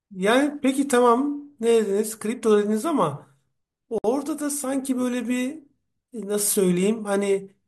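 At 3.98 s the speech drops into silence for about 59 ms, resuming at 4.04 s exactly where it stopped. This is a gap at a join of encoded pieces. Separately encoded sections were butted together untrimmed, leaving encoder delay and end padding. The edges are smeared.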